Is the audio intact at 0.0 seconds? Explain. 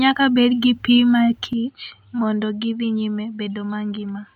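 Yes, the speech at 0.0 seconds is intact, with no fault to be heard at that moment.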